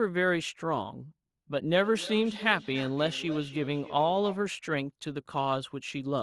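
From 0.10 s to 6.21 s a faint, steady tick runs under the speech, about ten per second, adding up to roughly seventy. These are clock slip clicks, likely from two unsynchronised clocks dropping or repeating a single sample each time, which fits an error of roughly 300 ppm.

Between 1.78 s and 4.47 s the speech comes back as a thinner, ringing repeat about a third of a second later, at its loudest about 16 dB below the speech. This is feedback echo between two devices: one device plays what the other sent, and its microphone returns it. The echo canceller misses it because the sound doesn't come from its own loudspeaker.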